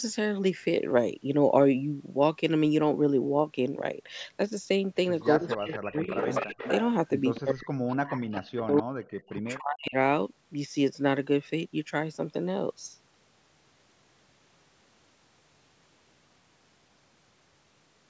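From 5.21 to 6.83 s a delayed copy of the speech, about 10 dB down and trailing by 244 ms, comes back. This is echo leak, likely from a loudspeaker echo canceller that failed to remove its microphone pickup. It returns briefly at 7.35 to 7.40 s, then from 7.88 to 8.83 s and 9.27 to 9.56 s, at about 20, 15 and 30 dB down.

While that echo plays, the main speech drops away: from 5.39 to 6.18 s by as much as roughly 35 dB, briefly at 6.51 to 6.57 s, and over 7.40 to 9.95 s by up to roughly 40 dB. This is speech suppressed in double talk, likely with the canceller turning the talker down along with the echo.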